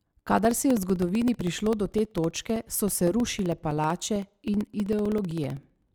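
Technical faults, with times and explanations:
0.06 to 5.89 s, periodic USB or driver dropouts: a recurring stall of the USB bus or audio driver silences about 2 ms of speech every 64 ms, so evenly spaced ticks sound under the signal. The waveform shows regular notches, and the spectrogram shows thin, evenly spaced broadband vertical lines.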